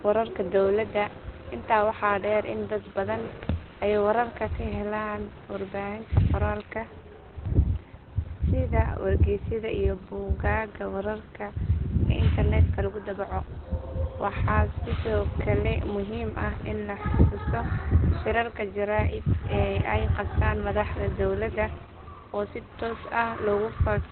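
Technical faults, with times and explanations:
throughout Opus compression: the speech sounds muffled and hoarse, with nothing above 4.3 kHz, so sibilants lose their hiss and consonant edges blur together. This is likely Opus in its speech (SILK) mode at narrowband, and the heavy damage fits a rate near 12 kbps. With so few bits, the encoder keeps only the core of the voice and drops the top band entirely. A spectrogram shows a flat, hard ceiling at 4.3 kHz with empty space above it.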